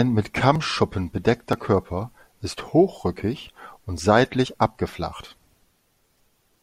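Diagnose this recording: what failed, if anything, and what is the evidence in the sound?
Audio missing between chunks shows up as short skips at 0.56 s, 1.53 s and 4.46 s, the last just after "hochrückig und". Each drops roughly 20 ms and joins the speech straight across with no silence. The skips land on whole-second steps, so the likely cause is a driver or buffer stage writing one-second chunks and losing a sliver at each handover. On the waveform each is an abrupt discontinuity, and a spectrogram shows a thin vertical seam where formant tracks jump.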